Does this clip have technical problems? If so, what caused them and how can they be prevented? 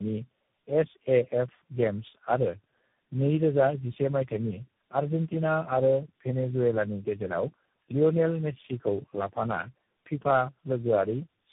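Yes. Tandem speech coding runs throughout: nothing above 3.8 kHz, and stacked roughness, muffling and warble rather than one codec's single layer of distortion. This fits about four speech coders in a row, each re-coding the last one's artefacts. Keeping one codec end to end prevents it.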